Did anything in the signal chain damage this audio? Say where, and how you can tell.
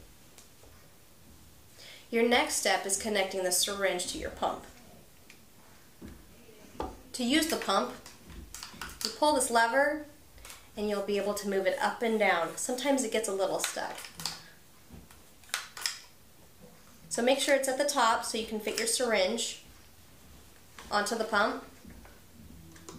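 No, nothing in the chain damaged this audio.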